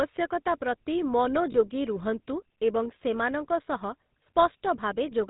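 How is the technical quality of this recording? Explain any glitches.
The technical quality is limited. The speech carries clear codec damage throughout, with one brief dropout.

GSM full-rate codec, throughout: the sound is coded with a simple vocal-tract model driven by sparse, evenly spaced excitation pulses, which fits a 13 kbps full-rate stream. Nothing survives above 4 kHz, and the voice has a plainly audible buzzy, gravelly roughness.

Lost GSM frames, at 1.52 to 1.56 s: the decoder filled the gap by repeating the previous good frame's parameters, which fits a single lost frame covering about 20 ms. The sound briefly smears into a short, rough, metallic ring.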